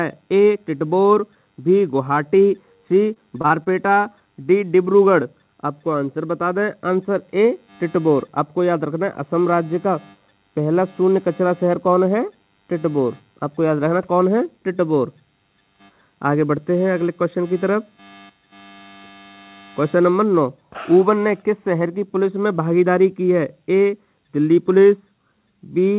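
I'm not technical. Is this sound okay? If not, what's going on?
No. From 3.14 to 3.98 s there is repeated packet loss (robotic sound). Five tiny pieces of audio went missing, none longer than about 22 ms. Each hole was patched by stretching the sound just before it, so that stretch sounds choppy, with pieces missing.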